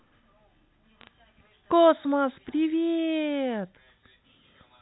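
Bit errors on a digital phone line appear from 1.01 to 1.07 s as a brief burst of sharp ticks and crackle over the speech. Flipped bits in the 8-bit G.711 samples, roughly one in a thousand, knock single samples far off their true value, producing clicks within the 4 kHz telephone band.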